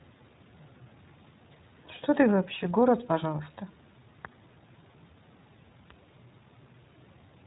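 From start to finish the speech carries iLBC codec damage. Nothing above 4 kHz survives. Independently coded frames, consistent with 20 ms, leave it plainly audible, a little rough and synthetic.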